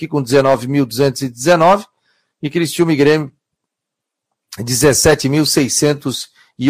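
Hard clipping appears twice in the speech, from 1.48 to 1.74 s and again from 2.81 to 3.15 s. The peaks are driven about 7 dB and then about 5 dB past what a stage can pass, so their tops are sliced flat. This adds a harsh, buzzy fuzz that rides on the loudest parts of the speech and is slightly rougher in the first stretch. The distortion follows the level of the speech itself, which separates it from a decoding fault.

A corrupt frame is decoded at 3.28 s, just after the second clipped stretch ends. A damaged compressed frame, plus a few neighbouring ones, was played with misread data, and this leaves a very faint, brief chirp of misplaced energy. A second corrupt frame decoded at 5.11 to 5.15 s is a single bad frame but far louder, coming close to full scale as a sharp blip. Both sound foreign to the speech rather than like an exaggeration of its loud moments, and each lasts only about the span of the damaged data.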